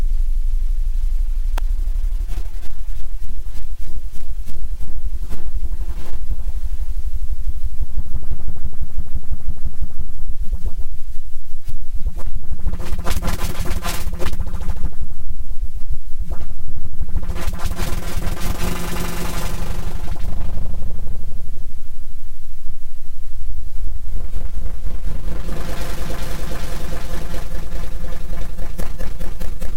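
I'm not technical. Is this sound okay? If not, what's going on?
No, there's one glitch: a sharp snap at about 1.58 s, sitting on top of the sound rather than part of it. That's an electrical switching spike, most likely a nearby switch, motor or static spark arcing briefly and getting picked up by the audio line.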